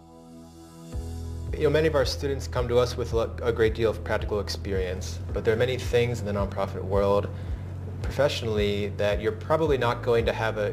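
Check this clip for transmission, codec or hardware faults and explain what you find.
One fault runs through the whole clip: crude rate conversion. Samples were dropped without filtering, fitting a 48 kHz to 44.1 kHz conversion. This adds a gritty inharmonic fizz about 30 dB down, visible as stray spectrogram lines.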